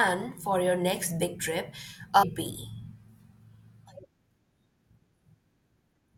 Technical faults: stream segment skipped

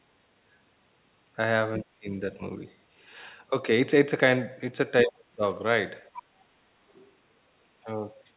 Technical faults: speech suppressed in double talk; other side's voice leaking through

